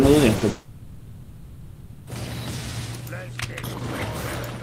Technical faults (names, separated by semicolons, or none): short concealed packet loss; long network dropout